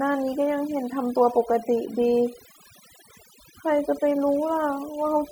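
From the first moment to the last, the speech carries overdone noise removal. The denoiser was pushed too hard, so any frequency band that drifted near its idea of the noise floor got pulled right down or switched off. Softer parts of the voice fell below that line and vanished along with the noise. You hear it as an eerily dead background speckled with little twinkling artefacts.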